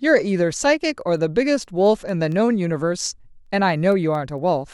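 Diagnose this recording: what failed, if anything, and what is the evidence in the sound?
Word clock ticks through the speech, from 0.26 to 4.61 s: about twenty sharp ticks, roughly one every fifth of a second. That's a digital link read by a receiver free-running on its own clock, drifting by around 100 ppm, slipping one sample per tick.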